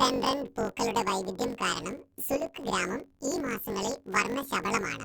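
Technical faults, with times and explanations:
Throughout, planar audio read as interleaved: speech sounds an octave high with a 47 Hz flutter, as each 21.33 ms block, likely 1024 samples, plays twice at double speed.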